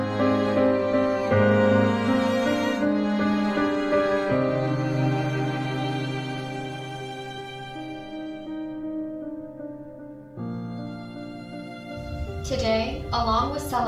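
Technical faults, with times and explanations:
No technical faults can be heard anywhere in the clip. Nothing in the audio calls for a time or an explanation.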